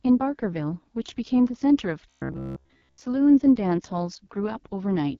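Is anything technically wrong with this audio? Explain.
Yes, there are two faults. The AMR wideband (HD Voice) codec damage runs through the whole speech clip. The speech sounds rough and raspy, and nothing is heard above 7 kHz. The coder models the vocal tract with sparse pulses, and that fails at low rates. The heavy damage fits its 6.6 kbit/s mode.

From 2.10 to 3.01 s there is robotic sound from repeated short buffers. The speech becomes a rigid, metallic buzz at about 66.8 Hz. This is likely caused by the playback repeating a roughly 15 ms buffer while new audio arrives late. Most of the stretch is repeats, not real audio.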